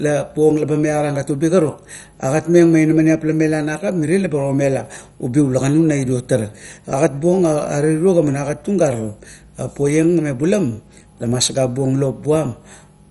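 Throughout the speech, nothing remains above 11.3 kHz, so it sounds dull. A gurgling, granular grit clings to it, with upper bands flickering in and out. This is likely MP2 compression, starved of bits, which fits a low bitrate near 48 kbps.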